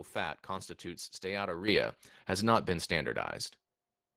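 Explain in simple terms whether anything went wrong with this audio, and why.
At about 1.68 s, between "fat constitutes" and "has not been", the microphone volume stepped up: the call software judged the input too quiet and raised it in one jump, so the speech and the background noise both suddenly get noticeably louder together.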